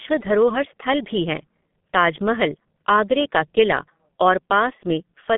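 Throughout the recording, the speech has been passed through a G.723.1 codec, which fits a low rate of around 6 kbit/s. The codec rebuilds the signal from a coarse, slowly updated model in 30 ms frames, inside a line band of roughly 150 Hz to 3.5 kHz, and nothing survives above 3.7 kHz. The damage is heavy: the speech sounds muffled and hoarse, and consonants smear together.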